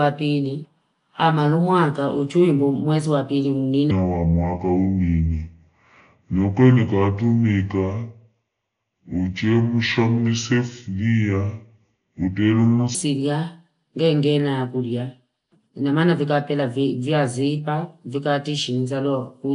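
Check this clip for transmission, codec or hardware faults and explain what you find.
Two faults are present in this speech.

From start to end the audio has a rough, hissy halo and a smeared, underwater quality. This is likely Nellymoser compression: fixed two-bit blocks starve weak bands, which are then filled with noise, and the damage is plainly audible.

From 3.91 s to 12.95 s, right after "amanumwanga uchuindu mwezi wapili", the speech turns deep and slow, about seven semitones low. The section is likely at the wrong speed, played at 0.665 times its recorded rate, so pitch and tempo drop together.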